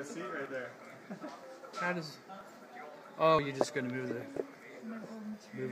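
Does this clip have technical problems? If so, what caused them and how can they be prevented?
Yes. Six brief skips fall at 0.46, 1.43, 2.41, 3.39, 4.36 and 5.34 s, spaced roughly a second apart. Each drops about 20 ms of sound and butts the two sides together with no silence between them. This is audio missing between chunks, likely caused by a recorder or processor working in one-second blocks and losing a sliver at each handover. Their strict regularity tells them apart from random dropouts. Prevention: use overlapping or double-buffered capture so no samples are lost when one block closes and the next opens.

From 1.60 to 1.63 s, a 21.3 ms patch sounds smeared and noisy rather than cut. This is AAC frame loss with concealment, and its length fits a single lost frame. The decoder rebuilt the gap from the last good spectrum instead of leaving a hole. That filled-in, hazy texture, and its timing off the one-second grid, distinguish it from the chunk skips. 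Prevention: carry the stream over a reliable transport or add forward error correction so frames arrive intact.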